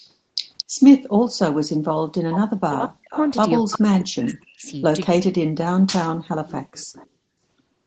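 Right at the start, from 0.0 to 0.12 s, there's a very faint echo leak: a copy of the speech trailing about 224 ms behind. It's likely a loudspeaker-to-mic path the far-end echo canceller didn't fully remove.

From 2.6 to 3.14 s the speech drops away almost completely for around half a second, which sounds like speech suppressed in double talk. With both sides talking, the canceller likely couldn't tell the talker from the echo and ducked everything.

Then from 3.11 to 3.33 s the echo returns much louder, roughly 15 dB under the speech, with a 309 ms delay.

From 3.63 to 4.68 s you get both at once. The speech is pushed down hard for about a second, while from 3.73 to 4.71 s the same 309 ms echo keeps bleeding through underneath. This band-limited call audio tops out at 8 kHz.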